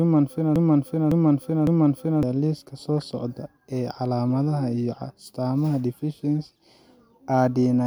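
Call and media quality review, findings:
Broken-record loop, 0.00 to 2.23 s, already under way at clip start. A 0.56 s fragment repeats exactly, back to back, three times. Likely a stalled player or stream resending its last held buffer. Audio for that span lost.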